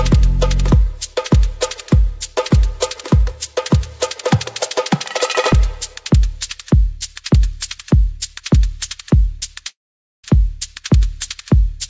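From 9.68 to 10.24 s, the audio breaks off. The last sound smears into a brief fading buzz, then nearly half a second of silence follows. Audio resumes with a piece missing. This is likely a long network dropout, concealed by the receiver over a band ending at 8 kHz.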